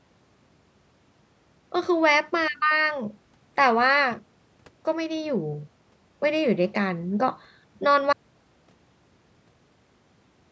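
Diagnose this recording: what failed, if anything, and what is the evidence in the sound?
An audio dropout to silence begins at 8.13 s and runs to the end, about 2.4 s of silence, likely from a lost input device or link upstream of the recorder, which kept writing empty samples. Unlike a noise gate or fade, the speech stops abruptly and no room tone remains.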